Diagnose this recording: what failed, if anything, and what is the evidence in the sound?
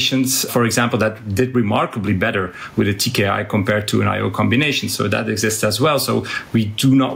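Gain pumping runs throughout the speech. The gain swings by around 15 dB, pulling down under loud syllables. The likely cause is input gain set far too high, with a fast limiter in call processing clamping each peak. The waveform shows a flattened envelope.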